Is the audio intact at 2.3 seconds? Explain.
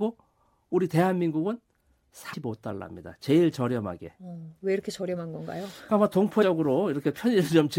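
No. Around 2.32 to 2.34 s there are compressed frames skipped: a run of encoded frames was lost from the file or rejected by the decoder as damaged, and playback resumed further on. Roughly a fifth of a second of speech never plays, around ten frames' worth, which fits a frame length of about 23 ms. At the join the speech jumps abruptly ahead.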